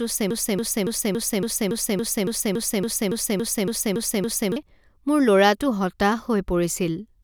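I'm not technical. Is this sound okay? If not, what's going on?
No. From 0.31 s to 4.56 s the speech is stuck in a broken-record loop: one 0.28-second snippet plays 15 times back to back. The player or stream likely stalled and kept resending its last chunk, so that stretch of audio is lost.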